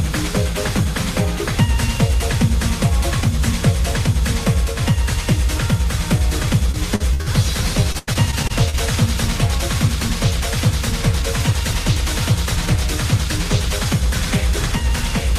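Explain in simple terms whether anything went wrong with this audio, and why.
Yes, two different things went wrong. First, repeated packet loss (robotic sound) occurs twice, from 6.71 to 7.28 s and again from 7.92 to 8.76 s. Chunks of the audio data arrived late or never arrived, and each time the playback filled the hole by stretching out the last bit of sound it had. The first stretch has four such gaps and the second has seven, the longest about 90 ms. That makes the audio choppy, with small pieces missing.

Second, an unreliable data bit affects 12.44 to 12.98 s. One of the lines carrying the digital audio was faulty, so one bit in the numbers describing the sound kept flipping at random. Each flip produces a sharp click of the same size, and many of them together come across as a steady crackle or fizz over that half second, including at moments when nothing else is sounding.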